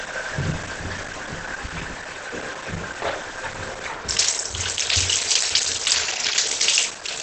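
Throughout, the audio is muffled and hoarse, with nothing above 8.6 kHz, likely Opus compression at a low rate, fitting its speech mode; a spectrogram shows a hard ceiling there. From 5.95 to 6.47 s, a drift correction step likely slows playback by about 6 percent, dropping pitch roughly a semitone before snapping back; spectrogram lines briefly sag downward.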